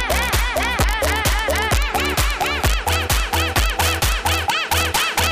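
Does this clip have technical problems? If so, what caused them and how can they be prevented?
Yes. Integer overflow runs throughout: gain about 2 dB too high wraps peaks to the opposite sign. Under one percent of samples flip, giving sharp cracks. Saturating arithmetic or a limiter before conversion prevents it.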